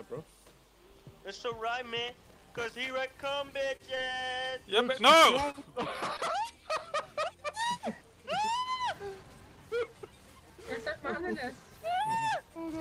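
From 2.08 to 2.9 s a worn or dirty contact in the signal path was making and breaking as it moved, producing loose connector crackle. Each break chops the signal, and the result is an irregular burst of crackling and scratching laid over the audio for a little under a second. The bursts come in uneven clusters, with no steady rhythm to them.

Between 3.57 and 4.54 s the stream lost or received late several packets, spread one here and one there, which gives scattered short gaps. There are about four holes, adding up to 40 ms of missing audio. The receiver covered them by extending the last sound, filling roughly 70 ms in total, or about 7% of that stretch. The longest hole is only about 30 ms, so each gap comes across as a brief tick or smear rather than a real dropout, with clear audio between them.

Two isolated instances of short concealed packet loss follow, at 5.52 to 5.56 s and at 6.17 to 6.21 s. 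Each time, 20 ms of the stream failed to reach the decoder in time. The receiver synthesised a continuation of the preceding sound and then blended back into the real signal, filling 20 ms in the first case and 17 ms in the second. Each is heard as a momentary smear or wobble, and a very short sound falling inside the hole can disappear entirely.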